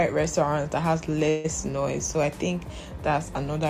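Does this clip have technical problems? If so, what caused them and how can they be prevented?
Yes. From 1.29 to 1.46 s there is a call audio freeze: the sound stalls and the last moment is stretched into a fading fill for about 150 ms, with no full silence. The likely cause is packets held up in transit, so the jitter buffer ran dry. Unlike packet loss, nothing is skipped. The audio resumes exactly where it stopped, about 150 ms later than before. A larger or adaptive jitter buffer and a steadier network path would prevent it.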